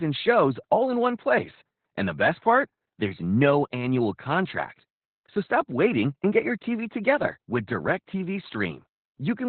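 From start to finish the speech carries heavy Opus voice compression: nothing above about 4.3 kHz, so it's squeezed into narrowband and sounds muffled, with a hoarse, faintly robotic edge from coarse SILK excitation coding, which fits a bitrate down around 8 kbps.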